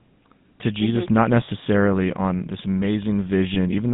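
GSM full-rate codec damage runs through the whole of this speech clip and is plainly audible. The voice has a buzzy, gravelly grain that fits the 13 kbps first-generation GSM coder, which rebuilds speech from a vocal-tract filter driven by a sparse, regularly spaced pulse train rather than the real waveform. The band is narrowed to roughly 150 Hz to 3.6 kHz, so sibilants and upper harmonics are missing and the sound is thin and telephone-like. Lost GSM frames cause brief glitches at 1.46 to 1.49 s and again at 3.54 to 3.57 s. Each gap is about 20 ms long, which points to a single missing frame. The decoder covers each gap by repeating the parameters of the previous good frame. That stretches the preceding sound into a short, rough, metallic ring, and the speech then resumes.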